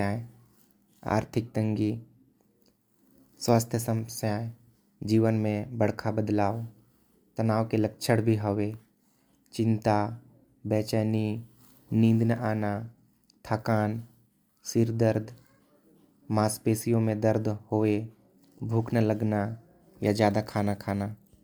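No dropouts, clipping, glitches or other technical faults can be heard anywhere in the recording.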